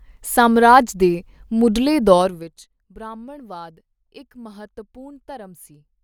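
From 2.09 to 2.65 s there's zipper noise: the level drops by roughly 20 dB in coarse 2 dB steps, around twenty a second, with no smoothing. Each jump clicks, so you hear a quick ticking ride on the speech as it fades.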